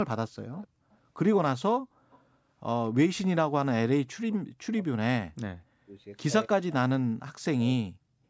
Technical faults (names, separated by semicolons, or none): echo leak; speech suppressed in double talk